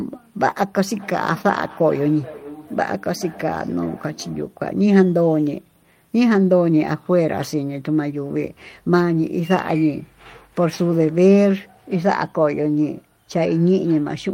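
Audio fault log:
0.93–4.55 s, feedback echo between two devices: the speech returns at a steady delay of roughly 400 ms, its loudest repeat about 20 dB below the direct sound. A second device in the same room is playing back what this microphone sent, and the microphone picks it up again; the local echo canceller cannot remove audio coming from another device's speaker. The fixed, distinct return sets it apart from room reverberation, which smears into a continuous tail.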